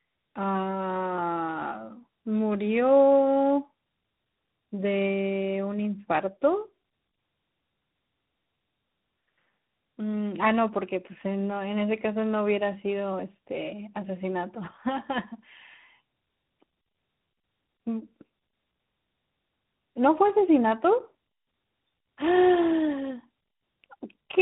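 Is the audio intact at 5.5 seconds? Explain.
No, at 5.5 seconds you're hearing tandem speech coding, which runs through the whole clip. The speech went through AMR-NB at 10.2 kbit/s, then G.711, then G.726 at 32 kbit/s, each recoding the last one's damage. It sounds rough, muffled and warbly, with nothing above about 3.8 kHz.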